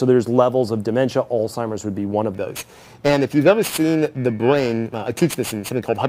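From 2.34 s to the end the sound takes on a rough, metallic edge from periodic clock jitter, interference wobbling the converter clock at around 2 kHz. A spectrogram shows sideband copies flanking each component at that spacing, strongest on high frequencies, and absent in silence.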